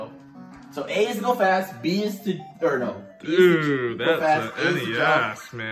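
No technical faults can be heard in this audio.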